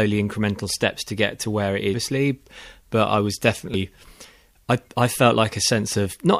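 At about 1.93 s, right after "get to where it", there's a quick glitch in the speech, and the same thing happens again at 3.74 s just after "but I was". Both are damaged data in a compressed stream: part of the encoded file got mangled, so the decoder choked on those frames, lost sync and hunted for the next good frame header. That's the tiny blip you hear, each lasting under 20 ms.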